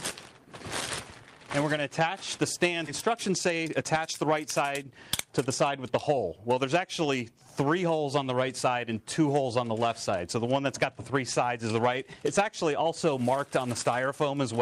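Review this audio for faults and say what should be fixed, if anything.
Skip ahead at 2.87 s: playback jumps forward with no filler, so about a second of audio is simply missing and the material on either side is butted together almost seamlessly. This happens when a run of audio is discarded while later audio is already queued, either lost in transit or thrown out by an overflowing jitter buffer, leaving a sudden discontinuity instead of a pause. Prevention: size the jitter buffer to absorb the arrival bursts on this path, and conceal small losses rather than flushing large chunks.

Jitter buffer speed-up from 3.07 s to 6.80 s: the audio runs at about 113% speed while its pitch stays unchanged, so this stretch sounds hurried. The receiver's buffer was holding more audio than its target, as happens when delayed packets arrive in a clump. To bring latency back down, it repeatedly cut out tiny pitch-period-length slices, about half a second in total. 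Prevention: drain excess buffer depth more gradually, spreading the removal over a longer span so the tempo change stays imperceptible.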